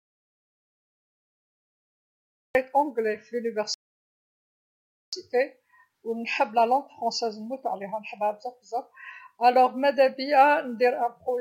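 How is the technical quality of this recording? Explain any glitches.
Two glitches affect the technical quality. An audio dropout to silence is already under way when the speech clip opens and lasts until 2.55 s. The input was likely lost while recording continued, leaving silence without room tone.

At 3.74 s, a rebuffering stall halts playback for about 1.39 s until 5.13 s. Speech then resumes exactly where it stopped, so unlike a dropout, nothing is missing; only time is added.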